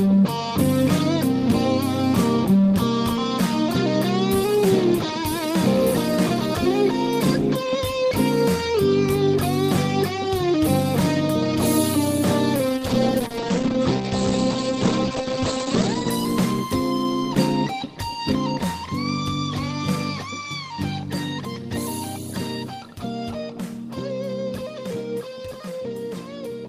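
From 12.77 s to 16.16 s there is a call bitrate drop. The encoder was starved of bits, which fits a fall from about 32 to 14 kbps. The sound turns coarse and watery. Its top end narrows from 20 kHz to 8 kHz, so it dulls for about 3.3 s.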